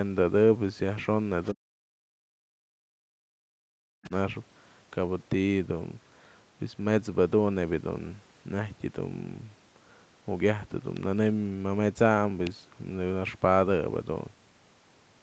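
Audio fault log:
1.44–1.53 s and 4.04–4.10 s, other side's voice leaking through: A faint second voice surfaces in two brief scraps, the first roughly 30 dB below the talker and the second roughly 25 dB below, each lasting under a tenth of a second. The likely cause is a loudspeaker on the talker's device playing the far end back into the microphone, with the echo canceller not removing all of it. What slips past comes through in scraps rather than as a continuous voice.
1.51–4.12 s, speech suppressed in double talk: For about two seconds within this span, the talker's level sinks repeatedly, at its deepest roughly 40 dB down, so stretches of the voice thin out or vanish in pieces. The likely mechanism is both parties talking at once, with the echo canceller unable to tell the near talker from the loudspeaker echo and so turning everything down. The leaked scraps at each end of this span mark where the far side was active. 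Across the clip the audio stops at 8 kHz, which fits the 8 kHz bandwidth of the Opus call codec.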